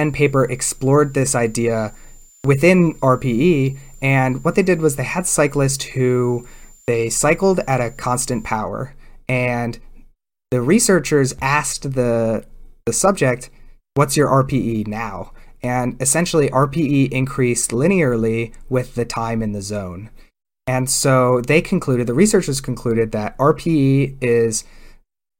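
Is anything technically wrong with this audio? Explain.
Yes. A switching supply whistle runs from 0.0 to 8.47 s, ending just before "power and". A switch-mode power supply cycling in an audible burst mode or beating with another supply leaks a thin tone near 7 kHz that drifts between 7.09 and 7.27 kHz, well below the speech.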